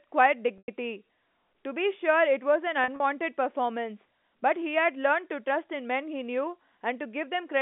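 Packet loss with pitch repetition hits this telephone-band speech at 0.58 to 0.68 s, a 100 ms gap, and 2.84 to 3.00 s, 80 ms scattered over 160 ms. In both places the receiver repeats the last pitch period; the short scattered losses give a held, buzzy sound, while the 100 ms gap fades into silence before the speech returns.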